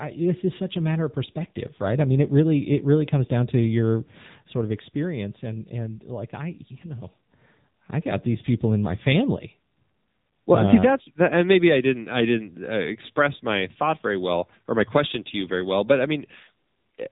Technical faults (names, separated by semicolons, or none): AMR narrowband mobile codec